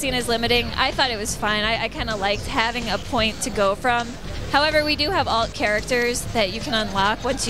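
At 1.40 s and again at 5.66 s, a DC step occurs. The waveform's zero line jumps suddenly, by about -29 dBFS. A 20 Hz high-pass then bleeds the offset away. Each jump lands as a low thump. The sound itself carries on unchanged.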